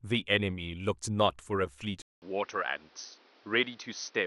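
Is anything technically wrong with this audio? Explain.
Yes, there's one problem. From 2.02 s the speech goes dull and a bit quieter after a 200 ms gap, with nothing above 6.2 kHz and new background noise. That's likely an input switched to a poorer device.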